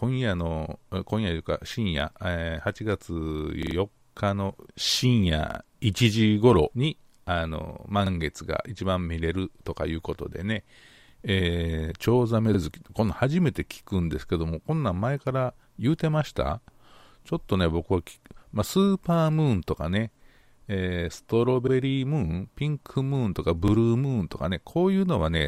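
Repeated buffers occur at 3.63–3.76, 5.50–5.59, 8.06–8.11, 12.54–12.59, 21.68–21.72 and 23.68–23.72 s. The playback device replayed the last block of speech when fresh audio arrived late. Each repeated block is about 43 ms long, which fits a 2048-sample buffer. The block plays three extra times at 3.6 s, twice at 5.5 s and once at each of the other points. Every repeat ends in a hard join, so each one is heard as a short stutter. No speech is skipped.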